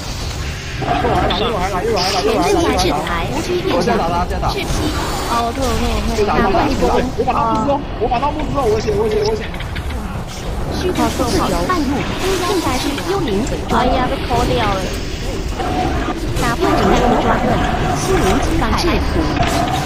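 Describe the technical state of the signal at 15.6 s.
At 15.58 to 15.61 s the audio breaks for about 30 ms. The sound skips forward and a short chirp, burst of noise or hole fills the gap. This is most likely a broken MP3 bit reservoir. MP3 frames store some of their data in earlier frames. When frames are lost, the next one reads leftover bytes from the wrong frame. The glitch lasts about one frame, which fits a frame length of 26.1 ms.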